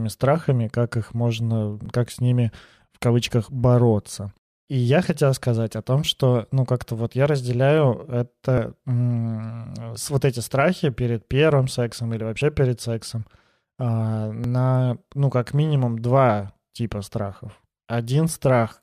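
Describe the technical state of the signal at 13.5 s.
At 13.5 s the speech signal is intact, with no audible dropout, distortion, glitch or other technical fault at that moment.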